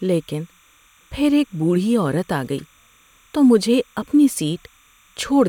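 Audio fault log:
throughout, timecode bleed: There's a thin, steady chirping warble sitting well under the speech, roughly 35 dB down, for the whole clip. That's linear timecode leaking in from a nearby track or cable. The code is a square wave flipping between two pitches around 1 kHz and 2 kHz as it encodes its bits, and the rhythm of the chirp fits 29.97 fps code. Because it never stops, it reads as a constant buzzy twitter behind everything.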